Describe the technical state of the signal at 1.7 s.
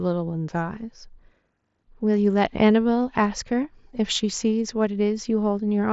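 At 1.7 s the speech is intact, carried normally through a Bluetooth mSBC headset codec that leaves nothing above about 7.7 kHz.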